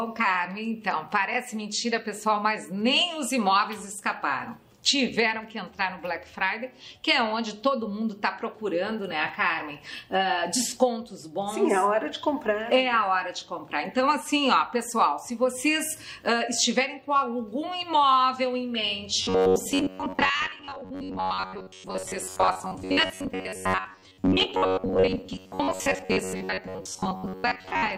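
From 19.23 s to the end, the sound turns into a rigid, metallic buzz at a fixed pitch of 93.8 Hz: robotic sound from repeated short buffers. The likely cause is late-arriving audio, with a roughly 10.7 ms block looped in place of most of the missing material.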